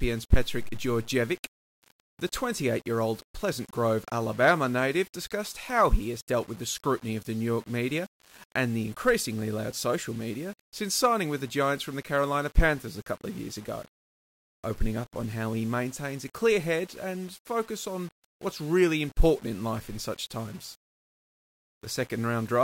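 Nothing in this speech recording stood out as a technical problem on listening.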